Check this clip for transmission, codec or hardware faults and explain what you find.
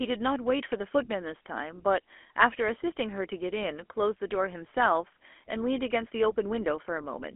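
One codec fault affects the entire recording. GSM full-rate codec, throughout: the speech is rebuilt from a vocal-tract model driven by sparse, regularly spaced pulses, which fits a 13 kbps full-rate stream. The result is a plainly audible buzzy, gravelly roughness, held inside a telephone band of roughly 250 Hz to 3.4 kHz with nothing above 3.8 kHz.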